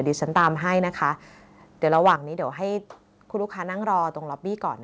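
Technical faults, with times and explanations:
0.36–0.47 s and 1.94–2.13 s, microphone overload: harsh, crackling edges on the loudest peaks, which run about 4 dB over and are flattened. This is likely an input level set too high.
1.02 s and 2.16 s, microphone volume stepped down: abrupt level drops of about 4 dB, then about 6 dB, likely from the call software cutting microphone input gain after clipping peaks.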